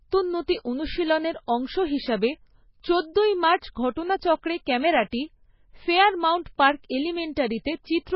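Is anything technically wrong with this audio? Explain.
Yes, heavy MP3 compression throughout, likely from a very low bitrate like 16 kbps: nothing above 5.5 kHz, and dropped weak bands make the speech sound watery and swirly.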